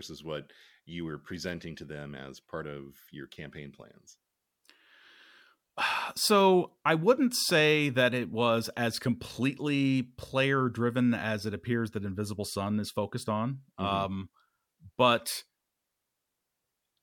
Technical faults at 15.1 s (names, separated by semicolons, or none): none